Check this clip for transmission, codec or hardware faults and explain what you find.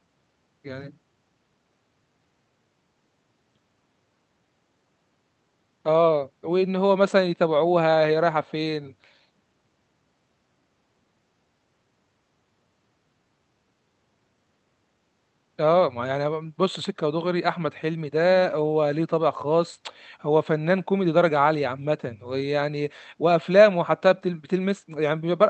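No transmission, codec or hardware faults turn up anywhere in this speech clip. It has come through a call path in working order, and the high end stops at around 8 kHz, which fits an Opus-coded call.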